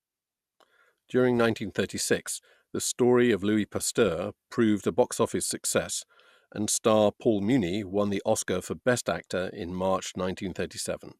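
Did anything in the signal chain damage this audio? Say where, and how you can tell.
Yes. A brief burst of burbling from 9.03 to 9.07 s, DAB burbling in the codec stage: reception bit errors corrupted the MP2 audio data across what sounds like two MP2 frames.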